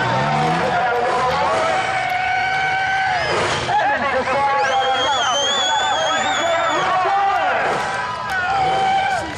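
At 5.25 to 5.28 s there's a corrupt frame decoded: one compressed frame had flipped bits, and the decoder played it anyway. Misread gains and codes spray energy into the wrong frequencies, giving a short, loud blip that peaks around -5 dBFS.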